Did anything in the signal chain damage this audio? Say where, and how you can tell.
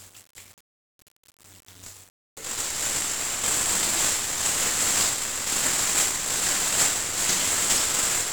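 Yes. The damage is at the codec stage: the sound was squeezed through 1-bit DFPWM compression, and the damage is heavy and continuous for the whole clip. There is a dense fuzzy, crackling noise floor riding on everything, with the treble smothered in hiss. A one-bit coder can only nudge its running level up or down at each sample, so it always overshoots and undershoots; at one bit a sample the stream runs at around 48 kbps. Unlike clipping or dropouts, the grit never lets up.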